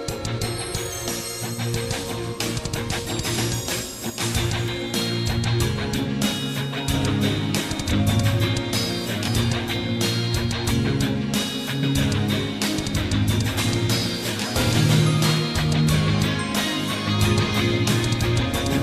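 Brief smeared blips, each a small forward jump in the sound, occur at 3.37, 4.67, 6.06, 7.90, 9.27, 11.82 and 13.56 s. These are compressed frames skipped: the decoder drops frames that are missing or refused, losing about 50 ms each time (roughly 70 ms at 4.67 s, and about 150 ms at 7.90 s), which fits 23.2 ms frames.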